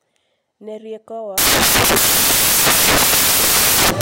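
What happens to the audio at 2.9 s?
At 2.9 s you're in the middle of samples built from the wrong bytes, running from about 1.38 s to the end. The reader is misassembling each sample's bytes, so the jittery low bits become the big part of every value, and the speech turns into loud, harsh broadband noise.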